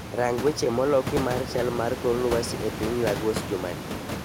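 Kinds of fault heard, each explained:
No technical faults detected.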